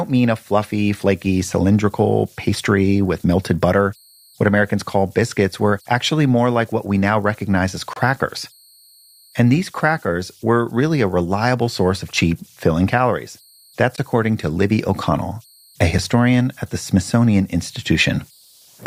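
Converter idle tones run through the whole speech clip. A faint whistle near 4 kHz sits under the quiet passages and the pauses. It comes from a delta-sigma converter working without dither. With very little input, its bit stream settles into a repeating cycle. That cycle produces a steady tone set by the input's small offset. The error lies about 36 dB below the signal. It also leaves a grainy texture beneath the softer sound.

The first gap between stream segments falls at 7.93 to 7.96 s, right after "we now recognize as". The sound stops dead for about 28 ms, with hard edges on both sides. A second gap hits at 13.96 s, just before "according to", and lasts about 17 ms. In each case the time stamps of two adjacent segments fail to meet. The player pads the hole with silence. The six-second spacing fits segments of about 2 s. Nothing is dropped; time is only inserted.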